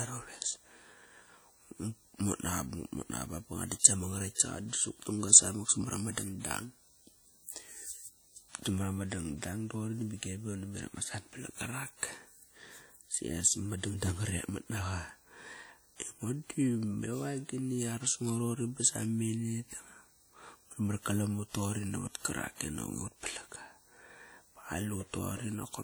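WMA compression, throughout the clip: the speech rings and sounds washy, with hiss that breathes with the signal, likely from transform coding at a bitrate around 48 kbps.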